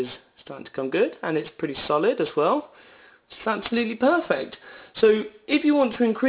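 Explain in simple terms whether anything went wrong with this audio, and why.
Aliasing runs through the whole clip: high sounds fold back at 4 kHz into gritty, wrong-pitched hiss, unlike a plain muffled cutoff, which fits careless downsampling to 8 kHz.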